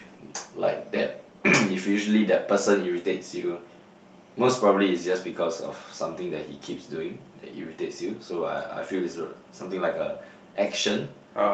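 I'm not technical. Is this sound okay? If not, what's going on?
Yes, nothing here is faulty; it's speech carried over an ordinary internet call connection, and the dulling of the highest sounds comes from how such calls compress audio.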